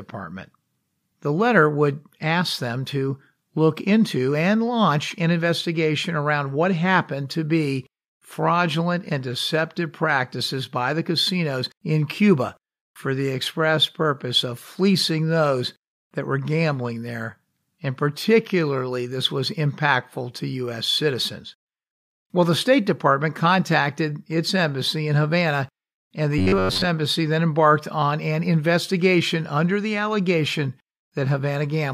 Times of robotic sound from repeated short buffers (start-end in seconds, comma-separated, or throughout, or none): 26.38-26.87